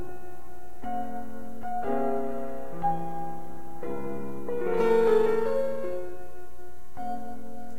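From 4.77 s to the end, crude rate conversion adds a gritty, inharmonic fizz riding on louder, brighter music, fitting a 44.1 to 48 kHz change by repeating samples.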